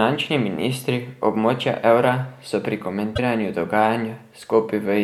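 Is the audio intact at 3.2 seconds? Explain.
No. Right after "območja evra so pri", from 3.15 to 3.19 s, the speech skips forward and a brief 40 ms glitch replaces it, ending just before 3.2 s. This is likely a broken MP3 bit reservoir. Some frames were lost, and the frame that followed reached back for borrowed data and found another frame's bytes instead. That garbles the first stretch after the cut, which here spans under two frames of about 26 ms each.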